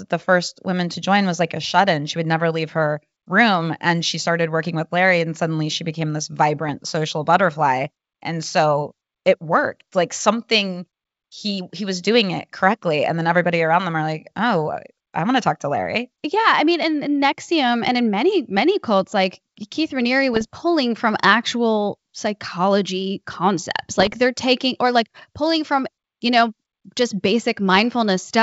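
Bit errors on an ADPCM link produce short rough bursts at 6.65–6.76 s (before "social butterfly"), 20.34–20.55 s (before "from actual psychology concepts") and 24.00–24.14 s (before "they're taking or like"). Each flipped bit knocks the decoder's step size and predictor off track, so the pops and brief level jumps persist for some milliseconds. The last burst has the highest bit error rate, about 0.5%.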